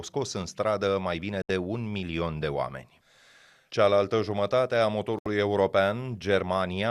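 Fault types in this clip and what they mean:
Digital broadcast dropout, at 1.42 to 1.50 s and 5.19 to 5.26 s: the receiver stopped getting valid frames and muted, so the speech cuts to silence for about 78 ms each time, which fits three lost frames, then resumes with that stretch missing.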